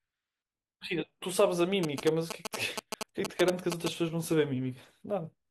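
From 1.83 to 3.88 s there are GSM signalling bursts: a nearby 2G phone is handshaking with its network, and the audio circuitry rectifies its radio pulses. You get that galloping dit-dit-dit of short 217 Hz buzzes, roughly as loud as the speech itself.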